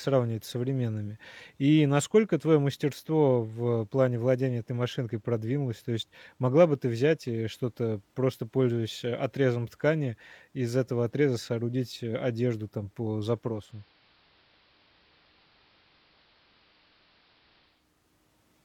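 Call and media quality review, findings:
Digital radio blending to analogue, 13.45–17.90 s. Speech dulls, drops about 4 dB, hiss rises to roughly 30 dB under the signal. Top end narrowed, fitting an AM analogue path. Receiver blend stage. Digital signal lost, so it cross-fades to the analogue broadcast over 0.3 s, then returns at 17.90 s.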